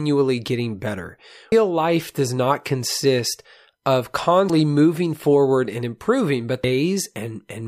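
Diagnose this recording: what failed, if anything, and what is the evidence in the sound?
The codec stage failed, with damaged data in the compressed speech stream. Three glitches of about 30 ms occur at 1.52–1.55 s after "getting better", at 4.50–4.53 s after "does not consist of", and at 6.64–6.67 s. Corrupted bytes made the decoder misread those frames and resynchronise.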